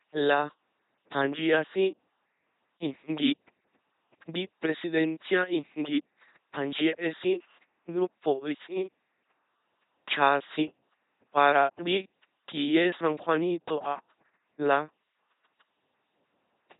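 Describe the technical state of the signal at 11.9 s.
At 11.9 s the speech carries the LPC-10 vocoder damage present across the whole clip. Each short frame is rebuilt from a ten-pole vocal tract filter fed by either a buzz pulse train or noise, never a mix, so the voice sounds heavily robotic and mechanical, with stray buzz or hiss where voicing is misjudged. Nothing sounds above 3.9 kHz. Unlike a waveform codec's watery smearing, the natural voice source is entirely replaced, which fits a rate near 2.4 kbit/s.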